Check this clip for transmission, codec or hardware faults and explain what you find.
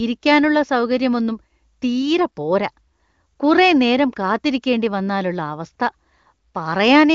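No transmission, codec or hardware faults.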